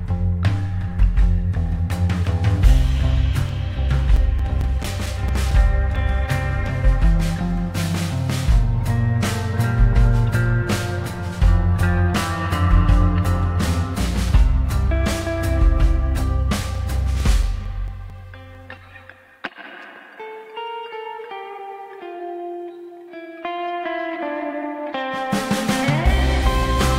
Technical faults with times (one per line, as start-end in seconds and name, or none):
3.49-5.96 CD scratch ticks
16.75-19.00 CD scratch ticks